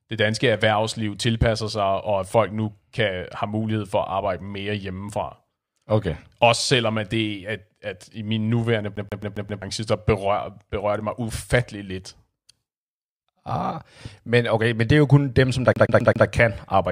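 Speech with a CD stuck on one turn twice: at 8.96 to 9.62 s, after "at i min nuværende", a 133 ms slice repeats five times, and at 15.73 to 16.27 s, after "kun dem som der" and before "kan arbejde", four times. On a waveform each burst shows identical blocks separated by brief silent gaps at the laser's jumps.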